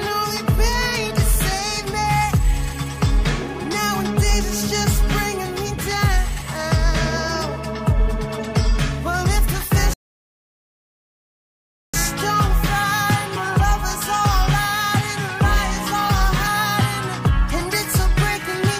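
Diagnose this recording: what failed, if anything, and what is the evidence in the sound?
A rebuffering stall occurred at the playback stage. At 9.94 s the sound drops to silence, then resumes at 11.94 s exactly where it left off. The player exhausted its downloaded audio and waited for more data, inserting about 2.0 s without losing any material.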